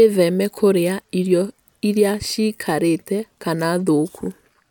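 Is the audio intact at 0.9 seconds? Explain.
Yes, at 0.9 seconds the speech runs intact, with no dropout, click, distortion or other fault audible at that point.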